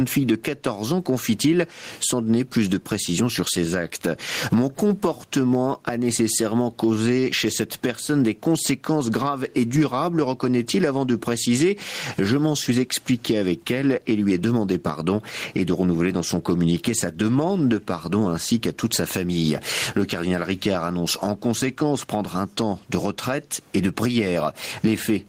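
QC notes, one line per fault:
throughout gain pumping: level swings about 10 dB with loud speech, squashing loud and soft parts closer together; likely overly high gain hitting a fast limiter.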